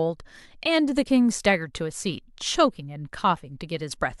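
At 3.33 to 3.38 s the speech breaks up briefly, caused by damaged data in the compressed stream: corrupted bytes make the decoder misread frames and lose sync. On a spectrogram this shows as a smeared patch of garbled energy; the waveform shows an abrupt discontinuity.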